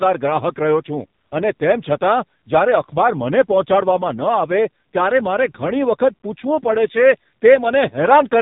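Throughout, heavy AMR narrowband mobile codec compression, which fits about 5.9 kbps, removes everything above 3.8 kHz and leaves the speech buzzy and synthetic.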